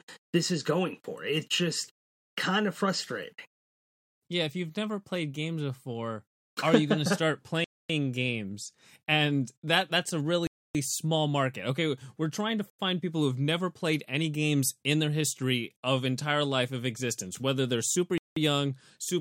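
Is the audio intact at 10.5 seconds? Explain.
No. At 10.5 seconds the speech drops out completely: a hole of about 0.28 s from 10.47 s, with the sound returning at 10.75 s. This is a block of digital silence, where a run of samples was replaced by silence. The signal cuts out and back without any fade, and at this length the gap is heard as a distinct hole rather than a single tick.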